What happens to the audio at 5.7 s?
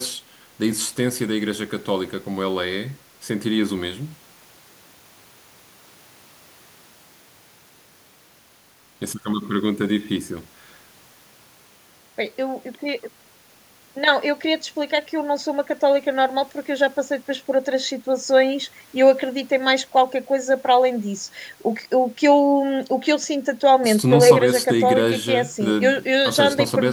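Nothing goes wrong at 5.7 s; the speech carries on intact through that moment with no dropout, click or distortion.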